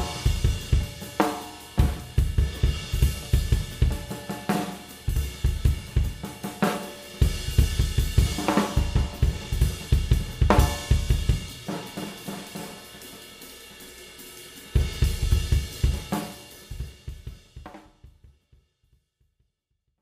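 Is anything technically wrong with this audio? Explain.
No, nothing stood out on listening, and the smooth fade-out that begins around 16 s and reaches silence at 20.0 s is a deliberate, gradual drop in level rather than a problem.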